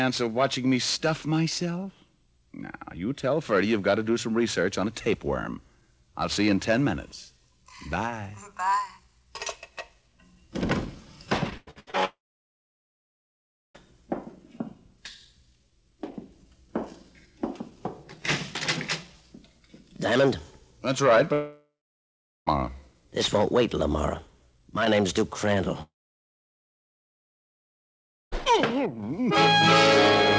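From 11.50 to 11.95 s, repeated packet loss leaves five gaps, the longest 91 ms, each patched by stretching the last sound, so the audio turns choppy and robotic. A long network dropout is the likely cause of the silences from 12.05 to 13.87 s, 21.33 to 22.48 s and 25.82 to 28.33 s. In each, a brief fading continuation gives way to silence, and the audio returns with that stretch missing.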